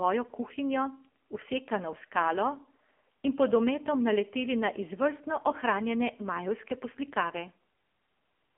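A speech clip coded with the AMR narrowband mobile codec throughout. It sounds buzzy and synthetic, as heavy damage from a low-bitrate mode near 6.7 kbps would. A spectrogram shows energy confined to roughly 250 Hz to 3.4 kHz, with nothing above 3.5 kHz.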